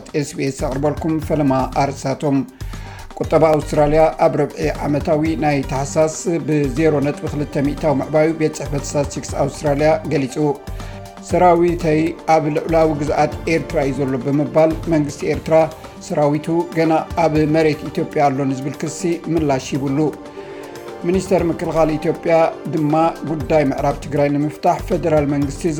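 From 3.54 s to 24.88 s, a short click or pop recurs at a steady spacing of about 4.27 s, seven or so times in all. The timing is very regular. This is clock drift buffer slips. Two devices likely run on separate clocks about 100 ppm apart. The buffer between them creeps until a tiny block of samples is dropped or repeated, which points to around fifteen samples per slip. Each slip breaks the waveform briefly, so it clicks.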